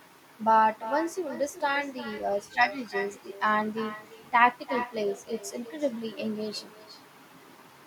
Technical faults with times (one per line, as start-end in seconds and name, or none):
0.00-7.86 echo with no canceller